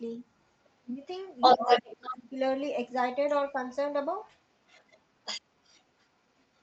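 Right from 0.64 to 0.7 s there's a faint scrap of the other side's voice leaking through, well down under the talker. That's likely a loudspeaker on the talker's end bleeding into the mic, with the echo canceller not fully cleaning it out. Then at 0.81 to 1.06 s the talker's own speech gets pushed down hard, something like 25 dB at the deepest point. That's speech suppressed in double talk: the canceller likely couldn't tell the talker apart from the echo, so it ducked everything.

The worst stretch is 1.4 to 2.15 s, where the leaked far-end voice actually sits louder than the talker. Overlapping it, from 1.57 to 2.37 s, the talker dips again by around 15 dB.

After that the leakage keeps coming back. It's quiet at 3.29 to 3.54 s, barely there at 4.23 to 4.27 s, and fairly noticeable from 4.67 to 6.06 s, only modestly under the speech. There's one last faint trace at 6.39 to 6.6 s. The top end stops around 8 kHz throughout, which is just the call path's normal bandwidth limit.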